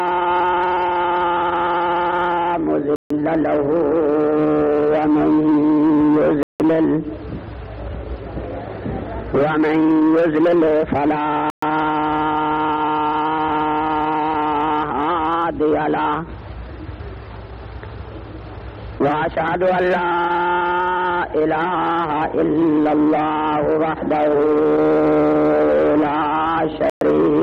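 Hard clipping runs throughout: peaks overdrive the stage by about 2 dB, so a small share of samples are cut flat, giving crackle on loud moments rather than smooth saturation. Silences at 2.96 s (144 ms), 6.43 s (169 ms), 11.5 s (124 ms) and 26.9 s (116 ms) are likely Bluetooth stalls, where the buffer ran dry. Unlike dropouts, the sound resumes where it stopped or slightly later.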